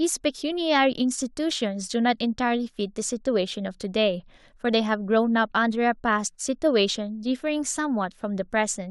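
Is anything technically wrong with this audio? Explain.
No technical faults are audible.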